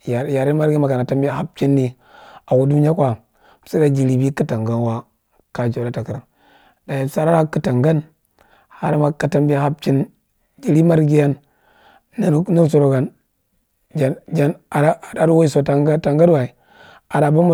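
No technical faults can be heard anywhere in the recording.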